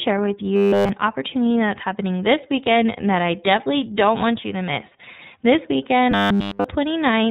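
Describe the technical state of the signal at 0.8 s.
At 0.8 s the signal sits inside a stretch of robotic sound from repeated short buffers, running from 0.56 to 0.89 s. New audio was likely arriving too seldom, so playback kept looping a buffer of about 10 ms while the real audio was skipped. Essentially the whole span is repeats, which stamp a rigid 100 Hz buzz over the speech and give it a metallic, mechanical tone.

Underneath that, the entire clip passes through the iLBC codec, which codes each 30 ms frame's excitation on its own and passes nothing above 4 kHz. The coding damage is plainly audible, fits its 13.33 kbps mode, and leaves the speech band-limited, rough and synthetic.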